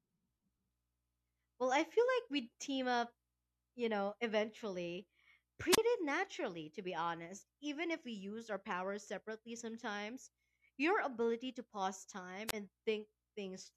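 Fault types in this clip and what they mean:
Wireless microphone squelch dropout: twice the speech gives way to a short burst of hiss and then a hole of near silence, once at about 5.72 to 5.78 s just before "naturally to be honest", and again at about 12.47 to 12.53 s just after "your ability to pause". The silent part lasts roughly 29 ms and 26 ms. The radio link from an analogue FM microphone weakened until the receiver's squelch shut the output off, then reopened it as the signal recovered.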